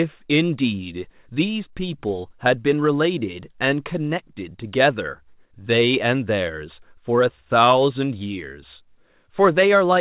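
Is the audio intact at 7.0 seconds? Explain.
Yes, the speech at 7.0 seconds is intact with no dropout, glitch or distortion, only the narrow call-codec sound with nothing above 4 kHz.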